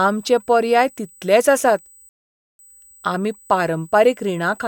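From the first moment to the end, a steady USB whine sits under the speech at 8 kHz, around 30 dB below it. The bus draws current in 125-microsecond microframes, and that pulsing leaks into the audio through shared power or ground, leaving a thin, high, fixed-pitch tone. Mains hum sits low, at 50 or 60 Hz and its harmonics. This tone sits high at 8 kHz and holds its pitch whatever the speech does.

At 2.09 s, right after "पर्याय तितलेच आसात", the audio cuts to silence until 2.59 s, a rebuffering stall of about half a second. The player ran out of downloaded audio and waited for more to arrive, then carried on from the exact point where it stopped. A packet-loss dropout would skip material and jump ahead. Here nothing is missing: the speech picks up exactly where it left off, and the clip simply runs about half a second longer.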